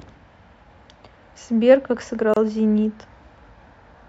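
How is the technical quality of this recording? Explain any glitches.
The speech has one glitch: a brief dropout from 2.34 to 2.37 s, where a gap of about 28 ms opens and the sound then resumes exactly where it left off. The edges are smeared by the codec, so the truly silent part is shorter. It is a gap at a join of encoded pieces: the audio was encoded in separate pieces and spliced untrimmed, so the encoder's start-up delay and last-frame padding remained as a short hole in otherwise continuous sound.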